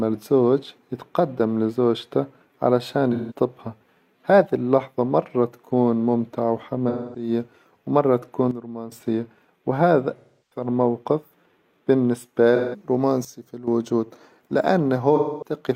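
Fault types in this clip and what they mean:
AAC frame loss with concealment: lost frames filled by the decoder from earlier spectrum, giving five smeared, noisy patches of about 0.17 to 0.34 s; the sound's texture breaks, unlike a mere level change.
Sudden gain jump: sound and background drop together by about 12 dB for roughly 0.4 s, twice, with abrupt edges and intact timbre, likely from an unramped digital gain change.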